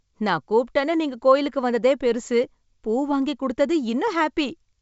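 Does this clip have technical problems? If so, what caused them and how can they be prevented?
No, this speech carries no technical faults: it arrives as G.722 wideband telephone audio at 64 kbit/s, with the band up to about 7 kHz intact and any coding effect no more than faint.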